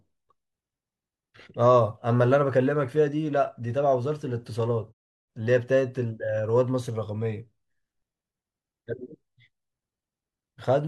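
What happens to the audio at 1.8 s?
Nothing goes wrong at 1.8 s; the speech carries on intact there.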